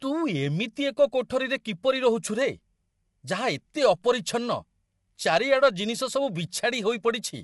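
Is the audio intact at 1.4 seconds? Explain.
No. At 1.4 seconds the speech carries the same damage heard across the whole clip: a rough, grainy texture with noise filling the gaps between the voice's harmonics, and nothing at all above 11.6 kHz. The likely cause is low-delay AAC compression (AAC-ELD), whose short frames resolve pitch harmonics poorly, consistent with a bitrate around 32 kbps. A spectrogram would show smeared, noisy harmonic bands and a hard ceiling at 11.6 kHz.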